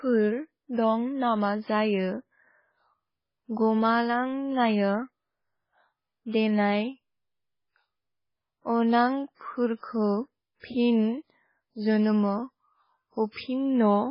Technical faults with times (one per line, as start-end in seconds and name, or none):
0.00-14.10 MP3 compression